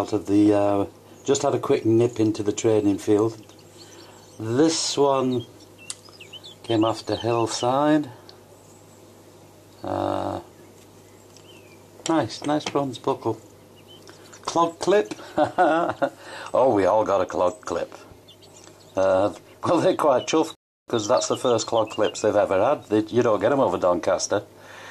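Right around 20.55 s there's a rebuffering stall: the player ran dry of downloaded audio and just sat waiting for more to arrive. You hear the sound drop out to silence until about 20.88 s, then pick up exactly where it left off, with nothing skipped. So no content goes missing, but the gap adds roughly 0.33 s to the running time, and that pause is what gives it away.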